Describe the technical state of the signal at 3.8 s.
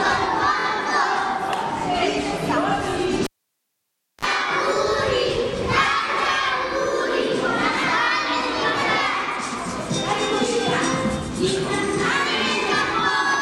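At 3.8 s you're right in the middle of a cable pulled and plugged in, which runs from 3.24 to 4.25 s. The lead is out of the socket, so the signal has dropped to near silence for roughly 0.96 s after the opening pop. While the tip alone makes contact it picks up a short 50 Hz mains buzz, about 39 ms of it, then a second pop as the sound comes back.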